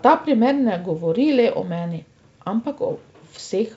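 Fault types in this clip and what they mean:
The speech comes through a wideband telephone path consistent with G.722 coding, with content audible up to about 7 kHz and any coding trace in the upper band faint at most, and no technical fault can be heard.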